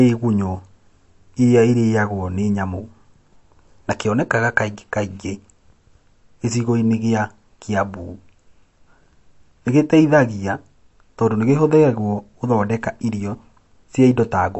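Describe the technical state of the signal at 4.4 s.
Watery, swirly speech with nothing above 8 kHz, heard here and throughout, is likely MP3 compression at a low bitrate near 48 kbps, cutting treble and switching weak frequency lines on and off.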